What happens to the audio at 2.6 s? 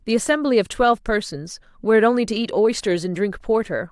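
Nothing goes wrong at 2.6 s; the speech there plays through intact, with no dropout, click, distortion or other audible fault.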